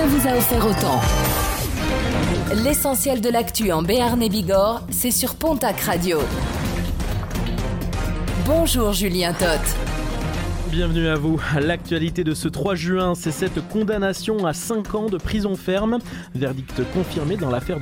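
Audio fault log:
No faults detected in the clip.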